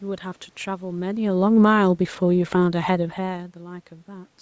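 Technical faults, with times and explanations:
0.88 to 3.05 s, automatic gain falling: the automatic gain control judged the incoming level too loud, or its background noise too strong for its starting gain, and lowered its gain gradually, by about 5 dB over 2.17 s. Because that gain acts on everything the microphone picks up, the speech and the room noise behind it sink together. That sets it apart from the talker moving near 1 s and again near 3 s, where only the voice changes level.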